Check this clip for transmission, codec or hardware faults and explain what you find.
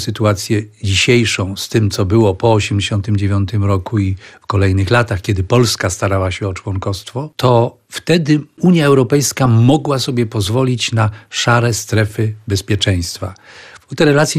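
Two faults are audible: a codec artefact present for the whole clip, and a short burst of transmission damage near the start.

MP2 compression is audible throughout. The sound is dull and carries a gurgling, granular roughness. The likely cause is MPEG Layer II coding at a bitrate around 80 kbps. Too few bits are shared across its 32 sub-bands, so upper bands drop out intermittently and the rest are quantised coarsely. On a spectrogram the top end shows as ragged horizontal stripes that switch on and off, with a low, uneven ceiling.

DAB burbling runs from about 1.39 s to 1.61 s. It adds short blips of noise over the programme. Bit errors at a small fraction of a percent have slipped past error correction into the audio data. Corrupted samples put blips of noise in single sub-bands, and corrupted scale factors make sub-bands jump in level for up to a frame, with 8 frames hit in all. A spectrogram shows isolated bright blocks in single bands there, and the waveform shows small irregular spikes.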